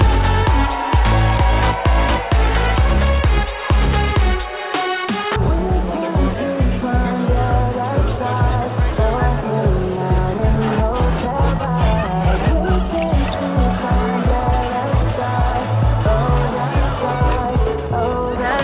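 At 5.36 s a skip ahead drops about a second of audio with no fill, so playback jumps straight forward; the waveform shows an abrupt splice with no gap.

Jitter buffer speed-up follows from 5.58 to 6.82 s at 103%, 8.16 to 8.96 s at 117%, and 10.89 to 13.80 s at 107%. Short pitch-period pieces are removed, so the sound runs faster at an unchanged pitch, audibly hurried in the 117% and 107% stretches. On a spectrogram the harmonics stay level while events crowd closer together. Throughout, the call codec leaves nothing above 4 kHz.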